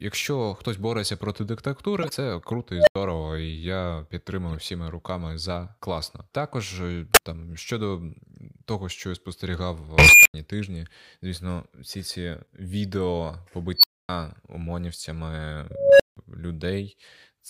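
Corrupt frames decoded at 2.02–2.11 s give brief chirps and noise bursts, as damaged compressed data lands at the wrong frequencies. At 2.76–2.96 s an unstable filter swells into a squeal of about 700 Hz, clips, then drops to silence for 85 ms. Further corrupt-frame blips occur at 4.52–4.55 s before "всіма руками за класно", 7.12–7.18 s before "там щодо" and 8.97–8.99 s before "я спостерігав". The unstable filter returns at 9.98–10.34 s (about 2 kHz), 13.77–14.09 s (about 4 kHz, 256 ms silence after) and 15.71–16.17 s (about 500 Hz). Each time, runaway feedback grows into a loud tone before the output cuts out.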